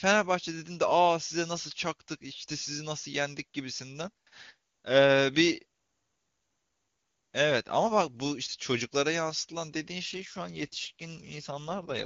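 From 10.05 s to the end, an AMR rate drop makes the speech raspy and synthetic, fitting a fall to 8.85 kbit/s. On the spectrogram the harmonics blur, the band stays unchanged, and there is no gap.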